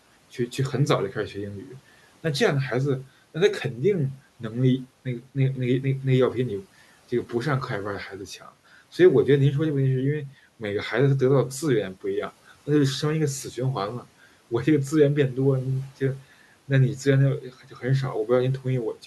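At 17.41 to 17.84 s, the noise suppressor cuts speech. It mistakes soft sound for noise. About a fifth of a second sounds swallowed, dipping by about 11 dB.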